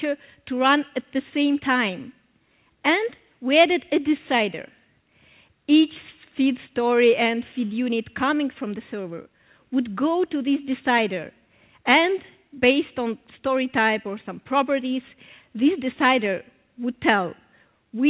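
No technical faults are audible.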